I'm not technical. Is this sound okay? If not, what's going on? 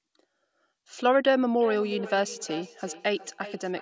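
No. From 1.6 s to the end there is feedback echo between two devices: two devices in the same room share the call, so one microphone picks up the other's speaker. Speech returns roughly every 0.4 seconds, thinner and ringing.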